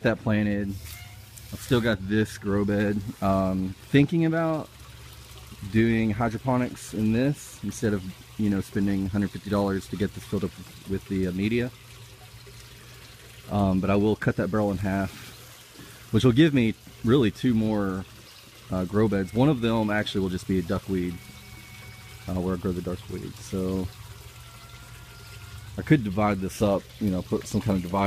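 No technical faults can be heard anywhere in the audio, with the signal holding steady throughout.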